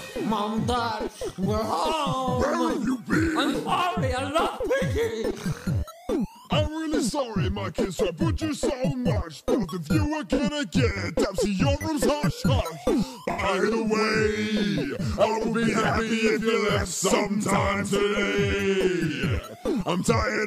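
Four events at 3.51–3.69, 10.34–10.41, 13.31–13.42 and 19.07–19.11 s sound like corrupt frames concealed: the AAC decoder muted or smeared damaged frames.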